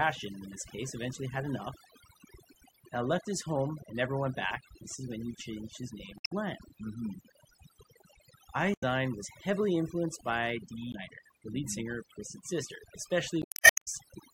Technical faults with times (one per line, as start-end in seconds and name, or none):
0.00-14.34 overdone noise removal
0.00-14.34 MP3 compression
6.15-6.32 damaged data in a compressed stream
8.71-8.84 damaged data in a compressed stream
10.91-10.95 damaged data in a compressed stream
13.42-13.72 damaged data in a compressed stream